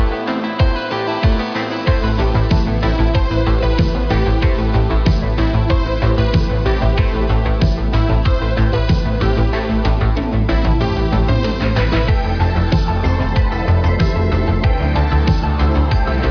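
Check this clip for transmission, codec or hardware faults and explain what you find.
No transmission, codec or hardware faults can be heard, and the signal comes through intact with no dropouts, distortion or interruptions.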